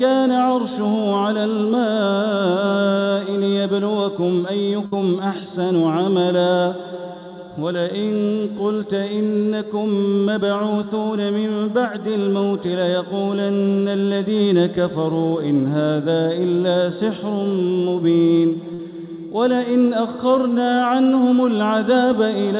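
At 4.86 s and again at 18.74 s, a burst of packet loss leaves gaps of about 60 ms and 50 ms, concealed by a fading continuation of the preceding sound before playback resumes further on, all within the 4 kHz band of the call path.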